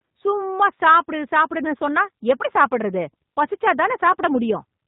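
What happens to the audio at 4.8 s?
At 4.8 s the speech is still under G.729 codec damage, present throughout: nothing above 4 kHz, plus a rough, synthetic buzz from pulse-rebuilt excitation, which a plain low-pass would lack.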